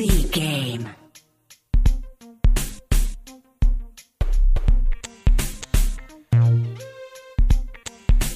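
No technical faults are audible.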